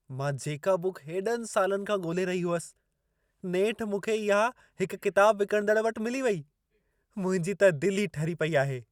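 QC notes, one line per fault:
No faults heard anywhere in the clip.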